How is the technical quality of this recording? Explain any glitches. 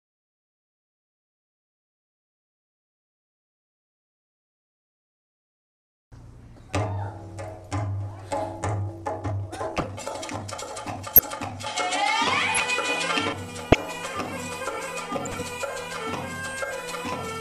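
The recording has clear technical problems: a rushed stretch, a spell of duller tone, and a string of short digital blips.

Corrupt frame decoded: Six brief chirps or noise bursts occur at 6.56–6.59 s, 9.78–9.83 s, 11.14–11.21 s, 12.55–12.60 s, 13.72–13.75 s and 15.25–15.42 s. The first is faint, at about -35 dBFS. The one at 15.25 s sits around -20 dBFS, those at 9.78 and 12.55 s near -10 dBFS, and those at 11.14 and 13.72 s loudest, near -5 dBFS. In each case damaged bits in a few compressed frames (several in the last) were decoded anyway. The misread data put energy at the wrong frequencies for roughly the span of those frames.

Time-stretched section: From 8.78 to 11.56 s the pace jumps to about 1.7 times normal while the pitch stays put, so the audio sounds clipped and hurried. This is likely processing that squeezed the section to fit a shorter length, keeping pitch steady by dropping short slices of the waveform.

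Input switched to a poorer device: Between 11.66 and 13.33 s the sound abruptly turns duller and boxier, with no gap at the change. The level shifts by roughly 5 dB. A faint new noise floor appears far below the signal. The likely cause is the system briefly changing to a lower-grade input, such as a different microphone or a headset's call mode, with a narrower band and a different tone and gain.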